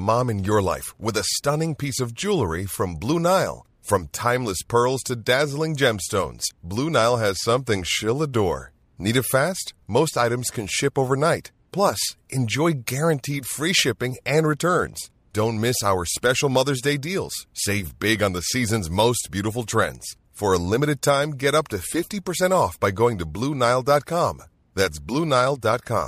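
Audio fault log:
No fault is heard in this speech clip.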